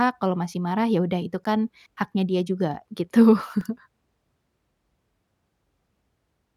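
Block of digital silence at 1.44 s, just after "ya udah itu", and at 3.61 s: the audio cuts out without fading, about 11 ms then 2 ms, each heard as a tick. The first fits an unfilled 512-sample buffer.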